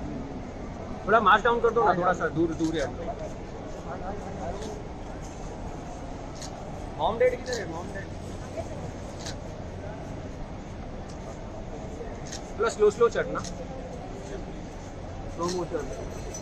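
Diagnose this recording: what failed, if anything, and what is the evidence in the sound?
Clock slip clicks from 0.17 to 16.33 s, roughly ten faint ticks a second; likely two unsynced converter clocks a couple of hundred ppm apart, dropping or repeating single samples.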